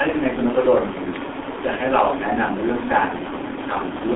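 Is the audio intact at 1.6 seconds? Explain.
No. At 1.6 seconds the speech is passing through the G.723.1 codec, which affects the whole clip. The line band runs from about 250 Hz to 3.5 kHz, so the top is muffled. The heavy damage sounds hoarse and smeared, fitting a rate near 6 kbit/s. Because the coder's model of the voice updates only every 30 ms frame, consonants blur, which sets it apart from a clean telephone band-limit.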